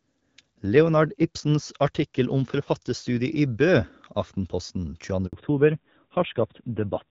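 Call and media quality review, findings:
Handover gap at 5.27 s: sound cuts out for 60 ms, nothing arriving while the call hops networks, so that slice is just gone. Decay is quick, then silence until the new link picks up.

Fallback to narrowband from 5.33 s to the end: HD Voice drops to an older narrowband codec, nothing above 4 kHz survives, tone goes duller and rougher. Before the switch the wideband path sounds clear, only light codec wear.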